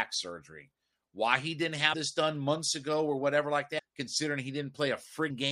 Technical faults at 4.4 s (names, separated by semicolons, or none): none